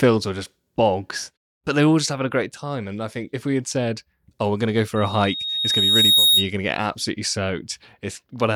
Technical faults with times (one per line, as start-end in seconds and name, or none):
4.96-6.51 loudspeaker feedback squeal